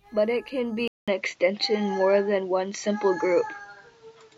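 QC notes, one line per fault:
0.88–4.37 s input switched to a poorer device: 200 ms gap, nothing above 7.6 kHz, new noise floor, level shift; likely a device change, not filtering.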